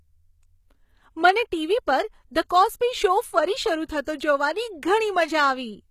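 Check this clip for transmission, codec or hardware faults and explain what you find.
Two faults are audible: codec damage across the whole speech clip, and two brief pre-echoes.

HE-AAC compression, throughout: the sound is likely from this codec at a low bitrate, around 20 kbps. Treble rebuilt from copied lower bands sounds gritty and lispy, with nothing above 14.9 kHz.

Pre-echo, at 2.49 s and from 4.03 to 4.07 s: block-spread quantisation noise leaks ahead of attacks, about 11 ms and 43 ms, as a short hiss before a softened onset.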